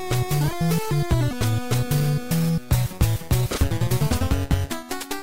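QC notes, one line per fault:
No fault found.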